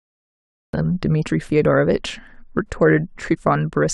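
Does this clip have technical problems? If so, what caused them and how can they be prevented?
Yes. Cut-off start: the audio sits in digital silence until 0.73 s, then jumps straight into speech mid-sound with no natural onset, because capture began after the talker had already started. To prevent it, start recording before speaking or keep a pre-roll buffer.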